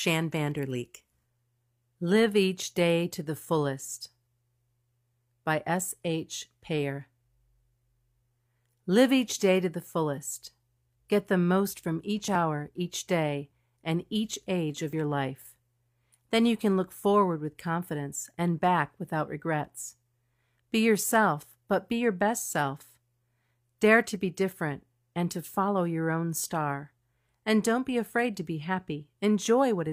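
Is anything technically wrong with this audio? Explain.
No, nothing technically wrong can be heard here.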